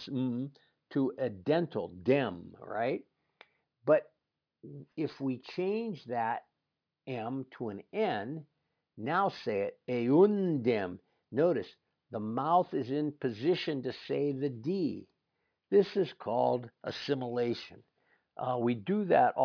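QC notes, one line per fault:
throughout: aliasing. The audio appears to have been dropped from 48 kHz to about 11 kHz with no anti-alias filter. Content above the 5.5 kHz fold reflects back down as spurious tones unrelated to the speech, sitting roughly 25 dB below it. Sibilants sound gritty and metallic. On a spectrogram, energy runs right up to 5.5 kHz with no roll-off, and mirrored, downward-sweeping streaks appear wherever the original high frequencies moved upward.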